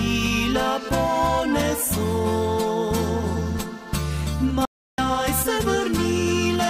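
At 4.65 s the sound cuts to dead silence for about 330 ms, returning at 4.98 s: an audio dropout to silence, likely a lost input link writing zeros.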